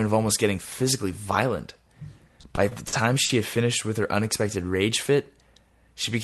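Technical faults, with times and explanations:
2.27–3.32 s, repeated stalls (stutter): Packets arrived late, so the jitter buffer ran dry six times. Each time, the last sound was stretched to bridge the wait, covering 180 ms in total, with the longest hold 50 ms. Nothing is lost, but the audio drags and stutters.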